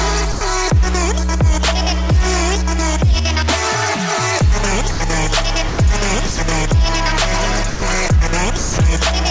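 The sender's voice detector likely mistook the sound for background and stopped sending, so it is dropped for 90 to 210 ms at 0.32, 4.91, 5.69, 6.26, 7.70 and 8.57 s, each gap filled with steady comfort noise, all heard through a G.722 call path with nothing above 8 kHz.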